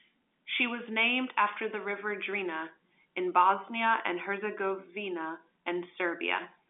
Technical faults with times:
none

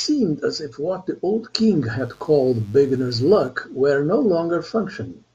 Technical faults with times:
1.99-3.49 mains buzz

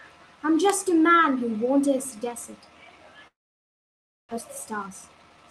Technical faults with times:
3.27-4.33 long network dropout
4.36-5.51 jitter buffer speed-up

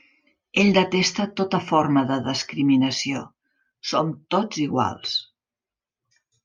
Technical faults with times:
none

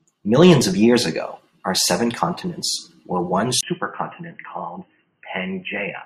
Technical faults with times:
3.61-6.06 input switched to a poorer device

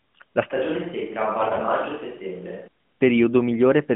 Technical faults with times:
0.52-2.68 switch to a distant microphone
1.38-1.63 AMR bit errors

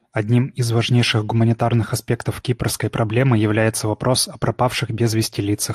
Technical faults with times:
0.00-5.75 MP2 compression

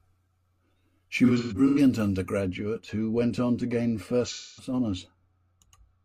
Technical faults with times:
1.25-1.78 AAC frame loss with concealment
2.41-6.04 de-emphasis applied wrongly
4.26-4.73 AAC frame loss with concealment

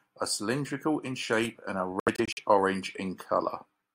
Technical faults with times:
2.00-2.39 Bluetooth dropout

